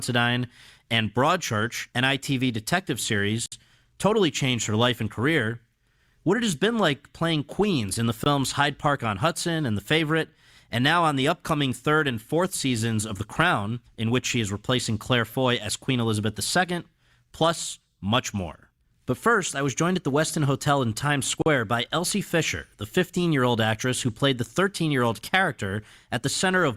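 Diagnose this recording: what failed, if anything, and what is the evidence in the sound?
A likely buffer underrun at the driver stage left output samples unfilled, producing blocks of digital silence at 3.46–3.52 s (60 ms), 8.24–8.26 s (20 ms) and 21.42–21.46 s (40 ms). Each cuts to silence and back without a fade.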